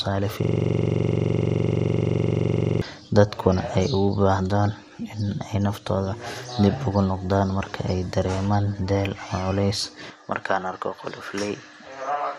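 Throughout the speech, a dull, gurgling, granular texture with flickering upper bands points to MP2 compression, likely at a low bitrate around 80 kbps. From 0.43 to 2.82 s, a system hang loop repeats one 42.67 ms slice, heard as a steady 23.4 Hz buzz, which fits a 2048-sample ring buffer. At 10.1 s, with no gap, the sound abruptly turns duller and slightly quieter, losing everything above 13 kHz and gaining a faint new noise floor. This is likely an input switched to a poorer device.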